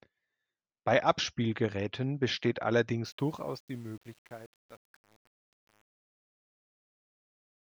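From 3.05 s to the end, truncation distortion on the fade-out. Only 8 bits remain, without dither, so the fading speech turns gritty from 3.2 s onward.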